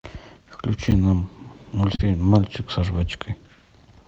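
From 0.88 to 0.92 s, chunks arrive out of order: one 10 ms chunk plays three chunks late, leaving a jumbled instant with three hard joins. At 1.95 to 2.02 s, short concealed packet loss hides about 40 ms of missing audio by extending the preceding sound, heard as a brief smear before it blends back.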